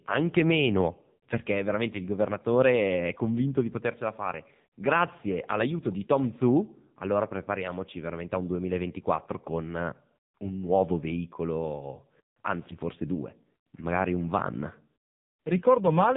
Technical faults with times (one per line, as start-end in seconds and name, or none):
0.00-16.17 AMR narrowband mobile codec